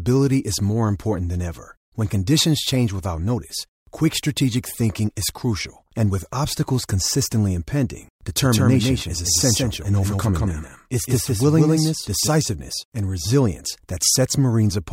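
Speech clip with a doubled audio track from 8.42 to 12.28 s, just after "with obstacles consistently impending": a dry, full-band copy trails about 150 ms behind at roughly 5 dB lower, starting and stopping abruptly, likely from a second, slower capture path.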